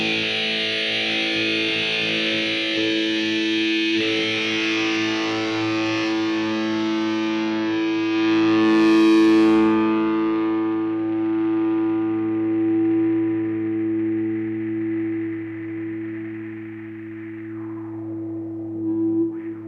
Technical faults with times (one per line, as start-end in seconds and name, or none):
none